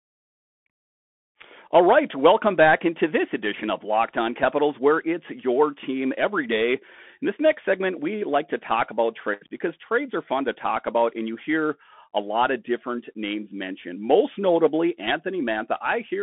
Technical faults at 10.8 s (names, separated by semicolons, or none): Bluetooth CVSD headset codec